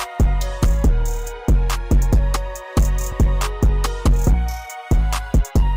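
At about 3.11 s there's a corrupt frame decoded: a couple of compressed frames carried flipped bits, and the decoder played them anyway, scattering energy into the wrong frequencies. You hear it as a short, fairly loud chirpy blip, peaking somewhere around -15 dBFS.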